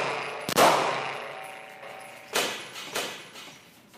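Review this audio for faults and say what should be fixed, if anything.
From 1.83 s to the end, a second copy of the sound appears, trailing the original by roughly 0.7 s and sitting about 5 dB lower. It cuts in abruptly, with no decay or room colouring, so it reads as a flat, full-band echo layered over everything that follows. This doubled audio track is likely caused by the same signal reaching the mix twice, once directly and once through a slower capture path or a misaligned edit. To prevent it, route the source through a single capture path and check edits for overlapping duplicate regions.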